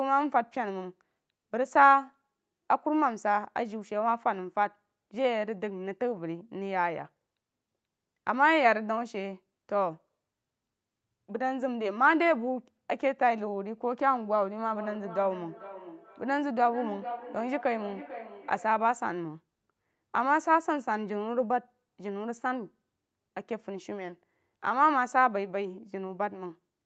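From 14.63 to 18.85 s there is feedback echo between two devices. A second device in the room replays the speech, this microphone picks it up again, and the local echo canceller ignores playback that isn't its own. Phrases come back roughly every 0.4 s, about 15 dB down, thin and ringing.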